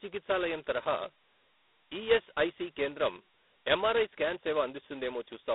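From start to end the speech carries G.726 ADPCM damage. A coarse, rasping hiss rises and falls with the speech level, pointing to 16 kbit/s coding. Plain telephone band-limiting (here 250 Hz to 3.7 kHz, nothing above 3.9 kHz) leaves no such hiss.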